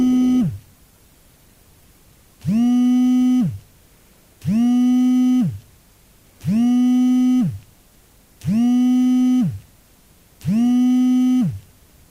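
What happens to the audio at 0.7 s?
At 0.7 s the audio sits inside the adaptive stream starting at a low bitrate (0.0 to 2.0 s). The player opens on a thin, artefact-heavy version, pointing to roughly 24 kbit/s Opus, with little or synthetic treble. At 2.0 s it switches to a fuller encoding with no gap, unlike a rebuffer.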